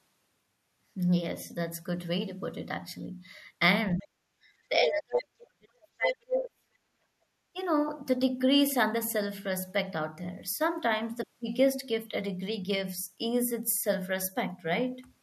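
From 3.95 to 4.31 s the speech drops by roughly 40 dB, likely speech suppressed in double talk, as the echo canceller ducks the talker while the far end is also active. Within that dip, at 4.01 to 4.05 s, a faint scrap of the other side's voice leaking through can be heard, around 35 dB below the speech, likely residual loudspeaker echo. From 4.69 to 6.71 s the speech is again cut down by roughly 40 dB for about two seconds, likely double-talk suppression. At 4.87 to 4.91 s a strong burst of far-end leakage sits only about 5 dB under the speech, likely echo the canceller failed to remove. From 6.99 to 7.25 s the background is gated by the echo canceller, with the room sound dropping about 21 dB before recovering. At 7.53 to 7.57 s the speech dips briefly by about 20 dB, likely another short double-talk suppression.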